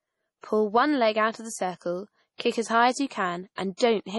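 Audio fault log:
Throughout: MP3 compression, heavy. Nothing above 11.4 kHz, and the speech sounds watery and swirly. This fits a low bitrate near 32 kbps, likely.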